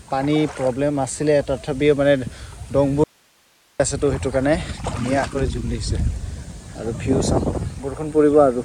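At 3.04 s the sound drops out abruptly to a faint residue of hiss, roughly 40 dB below the signal, and returns at 3.80 s after about 0.76 s, likely a break upstream with the path afterwards still live. Unlike a pause or fade, the cut is instant and the gap isn't silent.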